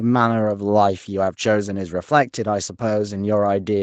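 Speech with no technical faults, carried through a call's microphone processing and a WebRTC call path whose codec leaves nothing above 8 kHz, as expected for a wideband call.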